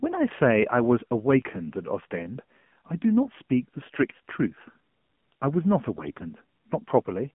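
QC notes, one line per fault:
Throughout: AMR narrowband mobile codec. The speech passes through a 2G/3G-style mobile speech coder. Nothing sounds above about 3.4 kHz, and the low end thins out below about 150 Hz. The coder rebuilds the voice from a vocal-tract model driven by a few pulses per frame. At this level the result is plainly buzzy and synthetic, which fits a low 7.4 kbps mode. The damage is audible across the whole clip.
5.94–6.24 s: AMR bit errors. For about 0.3 s the voice keeps roughly its pitch and loudness but turns hoarse, scratchy and gargly. Bits in the coded frames arrived flipped, likely on a weak radio link, while the frame check still passed, so the decoder used them. The excitation pulses landed in the wrong places and the fine pitch, gain and spectral values drifted. The span fits around fourteen hit frames at a bit error rate of about 7 percent.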